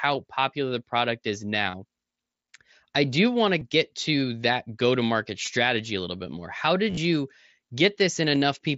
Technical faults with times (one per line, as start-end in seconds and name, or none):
1.71-1.74 concealed Bluetooth headset packet loss
3.60 concealed Bluetooth headset packet loss
5.46 concealed Bluetooth headset packet loss
6.90-6.97 concealed Bluetooth headset packet loss
8.35 concealed Bluetooth headset packet loss